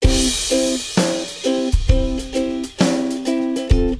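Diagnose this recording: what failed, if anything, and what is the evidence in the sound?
Nothing in the signal chain appears to have failed: the level, continuity and timing of the audio stay steady throughout, with no audible sign of trouble at any stage between capture and playback.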